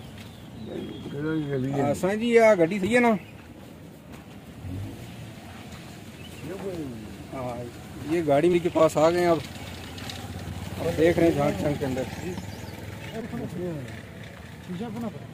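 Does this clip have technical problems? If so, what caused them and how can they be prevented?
Yes. Compressed frames are skipped at 2.83–2.86, 8.53–8.56, 10.49 and 13.21–13.24 s. The audio jumps ahead roughly 150, 70, 70 and 200 ms. That fits whole 20 ms frames missing or rejected as damaged. Prevent it with reliable, error-checked transfer and storage of the encoded file.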